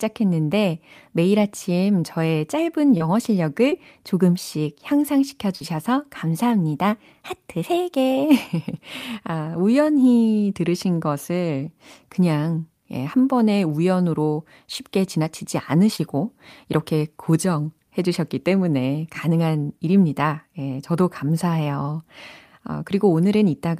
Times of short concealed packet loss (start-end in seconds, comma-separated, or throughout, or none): 2.97-3.02, 3.70-3.74, 5.56-5.62, 15.96-16.00